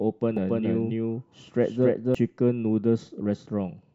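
Speech, with a doubled audio track from 0.37 to 2.15 s: a second full-band copy trails the original by around 300 ms at roughly the same level, with no decay or room colour, and it cuts in and out abruptly. Likely a second capture path or a misaligned edit.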